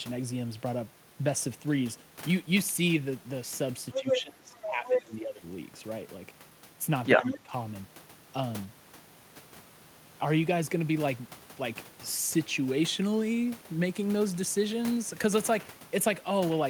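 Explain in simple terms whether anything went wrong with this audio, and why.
A couple of things go wrong here, both around moments when two people talk at once.

First, the other side's voice leaking through: scraps of a second voice show up at 3.92–4.22, 4.62–4.69, 4.85–5.02 and 7.28–7.38 s, sometimes as loud as the main speaker or louder, sometimes fainter. That's likely the loudspeaker sound getting back into the mic because the echo canceller didn't fully scrub it out.

Second, speech suppressed in double talk: from 3.94 to 5.43 s the main voice keeps dipping hard, adding up to about a second of lost level, and again more briefly at 7.17–7.52 s. Likely the canceller couldn't tell the talker from the echo, so it turned both down.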